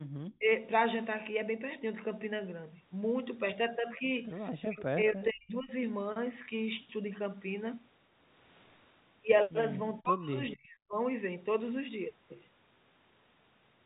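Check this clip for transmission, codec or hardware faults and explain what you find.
Three kinds of fault show up, all from echo cancellation on the call. The audio tops out near 4 kHz, as expected for a narrowband G.711 mu-law call path.

Background gated by the echo canceller occurs from 0.00 to 0.09 s. The room sound drops by about 29 dB for roughly a tenth of a second. The canceller was reacting to the far-end loudspeaker. It clamped the microphone hard and then let go. You hear a brief hole in the background at the very start.

Speech suppressed in double talk occurs five times: 0.37 to 0.50 s, 4.67 to 4.91 s, 5.07 to 5.72 s, 10.01 to 10.34 s and 10.54 to 10.99 s. The voice dips by around 30 to 40 dB, sometimes nearly vanishing. The longest loss is at 5.07 s, lasting most of a second. Both sides were likely talking at once. The canceller could not tell the near talker from the echo, so it pulled everything down.

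An echo leak occurs from 10.49 to 10.54 s. A faint copy of the voice returns 203 ms late, around 20 dB below the speech. It is only a short scrap. The likely cause is a loudspeaker on the far side. That end's canceller did not remove all of what its microphone picked up, so a residue was sent back. The scrap falls just before the last suppression begins.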